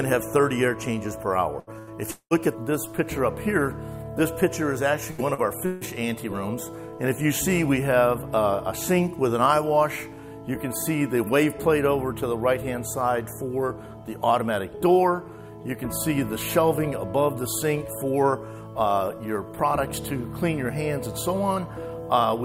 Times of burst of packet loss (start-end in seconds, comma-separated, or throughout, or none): 1.59-1.90, 5.11-5.21